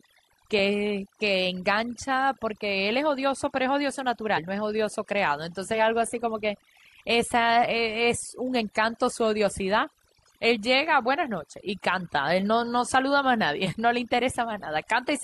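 Overdone noise removal runs through the whole speech clip. The noise reduction was set far too aggressively, so every frequency band sitting near its noise estimate is pulled down or switched off, and the quieter parts of the voice are removed along with the noise. What remains between phrases is near silence flecked with twinkling specks, while the voice itself has its softer detail stripped away.

Damaged data in a compressed stream appears at 1.00 to 1.06 s and again at 4.33 to 4.39 s. In both places the compressed data was corrupted, so the decoder misread those frames, lost its sync and had to hunt for the next valid frame header. Each event lasts under 60 ms and is heard as a brief chirp, squawk, click or short hole that breaks into the audio before playback picks up again.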